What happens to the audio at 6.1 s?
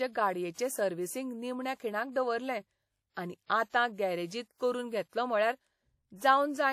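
At 6.1 s you're hearing the same thing that runs through the whole clip: WMA compression smearing the speech. It's likely a transform codec working with long blocks, so quantisation noise spreads over tens of milliseconds around each sound, leaving a ringing, washy edge and a hiss that swells and fades with the level. The damage is plainly audible, which fits a bitrate around 48 kbps, and there's nothing at all above 17 kHz.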